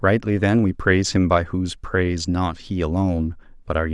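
Nothing in the recording stood out as a technical problem on listening.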